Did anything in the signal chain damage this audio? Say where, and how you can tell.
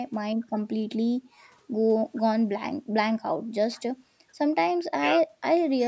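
No, nothing in the signal chain damaged this speech. It went through a call's microphone processing, which trims away the lowest bass and leaves nothing above 8 kHz, as that stage normally does.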